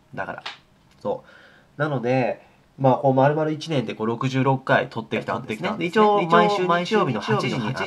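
From 5.16 s to the end, a doubled audio track appears. A second full-band copy trails about 0.4 s behind, roughly 5 dB quieter, starting abruptly. Likely a slower second capture path.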